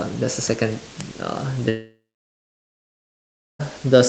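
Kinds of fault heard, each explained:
Long network dropout: from 1.69 s to 3.61 s the speech stops, and the last sound is stretched into a brief fading buzz. Then 1.6 s of silence follows before audio resumes, with 1.9 s of speech lost, likely because packets never reached the receiver.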